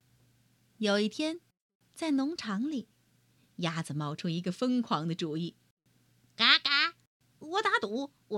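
No technical faults can be heard anywhere in the recording.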